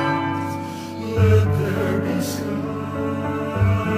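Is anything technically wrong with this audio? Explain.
No, nothing stood out as technically wrong on listening.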